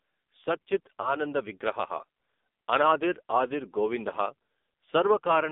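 Speech heard through the AMR narrowband mobile codec, buzzy and synthetic, with a band of roughly 250 Hz to 3.6 kHz and an empty spectrogram above. That heavy damage fits a low AMR-NB mode around 5.9 kbps. After "సత్ చిత్", from 1.02 to 1.17 s, lost AMR speech frames cause a brief warbling dip as the decoder repeats old settings. On the waveform it shows as a short sag in level, which points to a single lost 20 ms frame.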